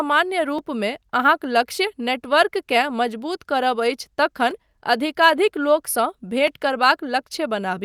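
From 0.59 s to 6.48 s the speech carries a click that recurs about every 1.96 s, roughly four times in all. This is the pattern of clock drift buffer slips: the likely cause is two devices running on separate clocks a few hundred parts per million apart, so the buffer between them gradually drifts until a few dozen samples are dropped or repeated at once. On the waveform each slip appears as a small discontinuity. On a spectrogram it shows as a thin vertical broadband line, evenly spaced through the speech.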